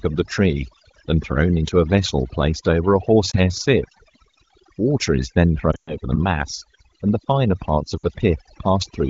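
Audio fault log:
Throughout, overdone noise removal. Noise reduction was set far too strong. Bands near the noise estimate are pushed down or cut entirely, taking quiet parts of the speech with them. The background drops and breaks up into twinkling specks.
3.31 to 3.36 s, 5.71 to 5.96 s and 7.98 to 8.04 s, lost AMR speech frames. Corrupted frames made the decoder repeat the last good settings at falling gain. The first is a 20 ms dip or warble. The second loses 140 ms over 160 ms, with one 120 ms run. The third loses 60 ms. The light wideband coding fits a rate of about 15.85 kbit/s.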